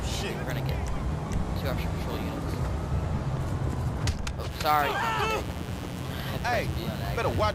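At 4.48 s a mains buzz begins and runs to the end: sharp switching spikes from the 60 Hz supply leak in twice per cycle, giving a steady, raspy buzz roughly 10 dB below the sound. A spectrogram shows stacked horizontal lines at 60 Hz multiples reaching several kHz.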